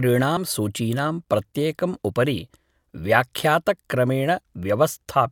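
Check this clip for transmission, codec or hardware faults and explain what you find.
One fault is present. Compressed frames skipped at 0.37 s: a single 32 ms frame went missing or was rejected by the decoder, so the speech jumps ahead by about 30 ms.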